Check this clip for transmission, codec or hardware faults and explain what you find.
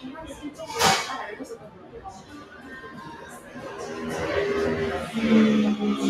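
A speech-style noise suppressor is processing this non-speech audio throughout, and it clamps down on two specific stretches.

Noise suppressor applied to music or sounds: across the whole clip the gain swings by roughly 15 dB. The suppressor mistakes sustained tones and ambience for background noise, so tails sink and the sound pumps and thins. Unlike compressor pumping, which follows loudness, this follows how steady the sound is.

Sound cut by the noise suppressor: at 0.32–0.59 s the level dips by up to about 8 dB, and at 1.41–3.58 s by up to about 9 dB over roughly a second and a half. Held sounds sink while sharp onsets survive, so these are not dropouts, which would silence everything.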